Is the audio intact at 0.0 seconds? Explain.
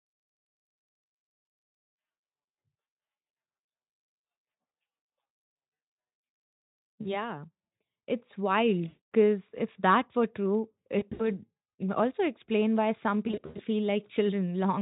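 Yes, the audio is intact at 0.0 seconds, with no fault at that moment.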